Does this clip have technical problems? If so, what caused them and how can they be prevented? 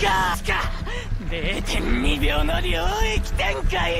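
No, there's nothing technically wrong to flag here, so there's nothing to track down or prevent.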